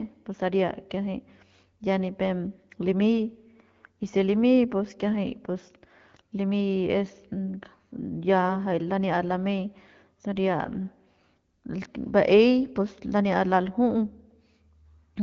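No technical faults are audible anywhere in this recording.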